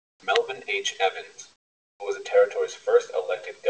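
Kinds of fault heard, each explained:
Comfort noise in place of the background: for the first 0.23 s, and from 1.52 to 2.0 s just before "was the", the real room tone is replaced by a steady, featureless hiss about 12 dB and then about 18 dB quieter, likely because transmission paused in the silences and the receiver synthesised filler. On a spectrogram these stretches are flat, evenly smeared bands, capped at 8 kHz like the rest of the call. The waveform shows an abrupt drop to a uniform low floor.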